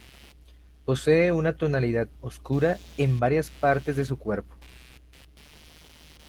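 Right through the speech there's computer activity noise: a buzzy, chirpy scratching pulsing at around 150 Hz, sitting roughly 30 dB under the signal. It comes from processor or graphics load shifting the ground the audio circuit shares, so it tracks the computer's activity, not the speech.

On top of that, the whole thing carries plainly audible Opus voice compression, which sounds like a rate around 16 kbps in hybrid mode with 20 ms frames. The low band goes through linear prediction, with a layer on top reaching about 20.2 kHz. Coarse excitation coding leaves the speech hoarse and a little robotic.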